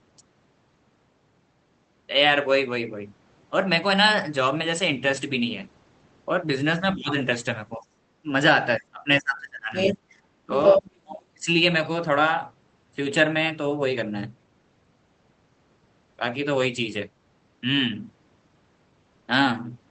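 Speech suppressed in double talk runs from 6.79 to 7.45 s, with the talker dipping by roughly 15 dB, then again at 7.77–7.89 s (about 20 dB) and briefly at 8.23–8.27 s (about 10 dB). The echo canceller likely mistook simultaneous talk for echo and turned everything down. The other side's voice leaking through first appears at 7.82–7.86 s as a faint scrap, around 40 dB below the talker, where the canceller likely failed to remove loudspeaker pickup from the microphone. From 8.78 to 10.01 s the suppression deepens, the talker falling away by as much as 30 dB for about a second. The leaked voice returns at 9.74–10.18 s, roughly as loud as the talker. At 10.47–11.48 s the talker is again pushed down by about 25 dB, while the far voice at 10.52–10.90 s sits slightly above the talker, by about 5 dB, and is heard through the same band-limited Opus path as the rest of the call, with no content above 8 kHz.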